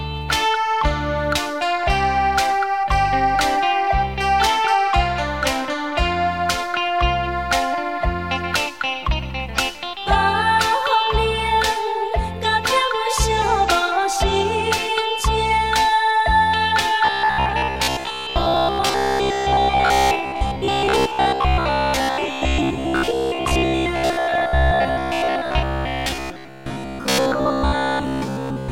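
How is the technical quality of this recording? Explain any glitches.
The recording is clean until 17.05 s, when a robotic sound from repeated short buffers takes over to the end at 28.71 s. It buzzes rigidly at 66.7 Hz. The likely cause is late audio, patched by looping a 15 ms buffer, so most of the real sound is skipped.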